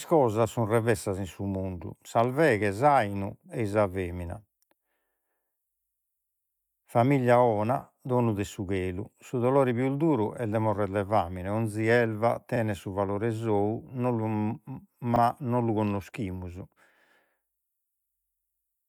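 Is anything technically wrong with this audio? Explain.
Yes, there's a repeated buffer glitch twice in this speech, at 12.56 s (right after "de famine ogni elva", before "su valore") and at 15.16 s. Each time, fresh audio arrived late, so the device played the same 40 ms chunk an extra time with a hard join, making a quick stutter.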